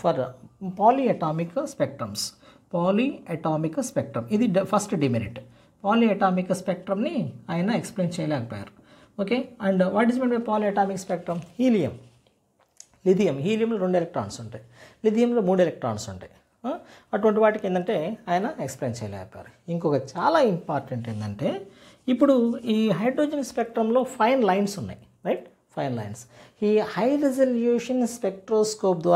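Nothing in this audio stands out as a technical fault, so there's nothing here to flag.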